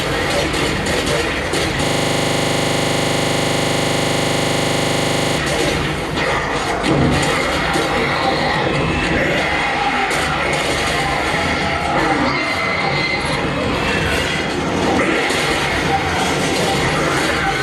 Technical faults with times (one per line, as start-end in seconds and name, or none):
1.85-5.38 system hang loop